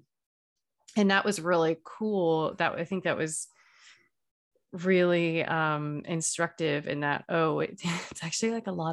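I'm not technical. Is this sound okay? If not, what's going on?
Yes, this one's fine: there's nothing wrong with it that you'd need to worry about.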